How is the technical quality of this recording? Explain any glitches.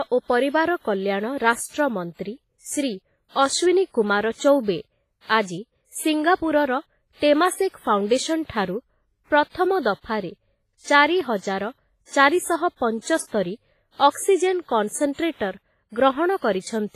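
The recording has two codec problems: constant heavy coding damage and one smeared attack.

Throughout, the speech sounds washy and ringing, with hiss breathing along with it and nothing above 15.4 kHz. The likely cause is WMA compression near 24 kbps. Unlike plain band-limiting, it smears detail and adds noise.

From 5.42 to 5.47 s, pre-echo: a 50 ms hiss precedes a sharp attack because block-wide quantisation noise leaks backward. Unlike a click, it sits before the onset.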